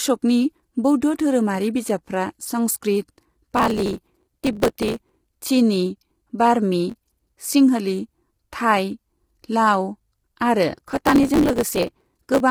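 Throughout the speech the voice sounds rough and grainy, with a hiss-like fill between harmonics and a thin, somewhat synthetic top end. This is most likely low-delay AAC compression, heavily damaged at a rate that fits about 24 kbps, where short frames resolve pitch poorly.

From 3.57 to 5.15 s, just before "चिनी बार्मी", then from 6.90 to 7.41 s right after those words, and again from 10.75 to 12.40 s, gritty bursts of crackle tear across the sound. This is processor overload crackle: hundreds of sub-millisecond buffers miss their deadline and are skipped, each leaving a hard-edged gap.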